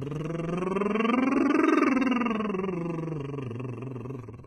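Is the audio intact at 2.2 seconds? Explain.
No. At 2.2 seconds the music carries heavy damage that runs through the whole clip. The treble sounds gritty and metallic, and nothing is heard above about 11.7 kHz. This is likely HE-AAC compression at a very low bitrate, perhaps 16 kbps. That codec keeps only the lower spectrum and rebuilds the top by copying lower bands upward. So the upper harmonics fail to line up with the real ones.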